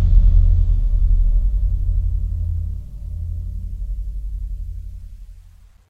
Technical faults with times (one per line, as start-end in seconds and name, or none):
none